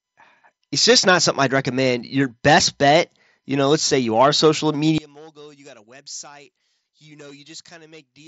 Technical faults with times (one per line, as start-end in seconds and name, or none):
4.98-8.28 one channel inverted